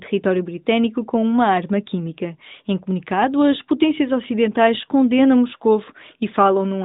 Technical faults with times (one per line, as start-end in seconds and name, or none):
none